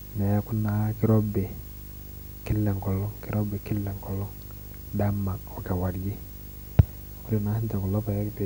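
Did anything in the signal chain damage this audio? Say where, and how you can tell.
Yes, in the analogue wiring. A video or display buzz sits under the speech for the whole clip: a rasping 50 Hz buzz at the picture's field rate, topped with gritty hash and a thin whistle at 15.6 kHz, the line rate, all roughly 15 dB below the speech. A screen or video cable is coupling its scanning signals into the audio lines. Plain mains hum at 50 Hz would be smoother and would lack both the hash and the line-rate whistle.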